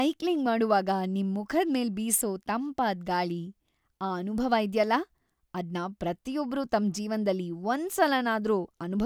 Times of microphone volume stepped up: none

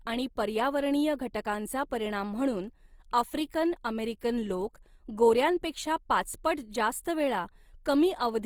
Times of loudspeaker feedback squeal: none

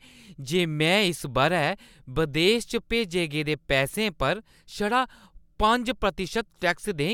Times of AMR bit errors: none

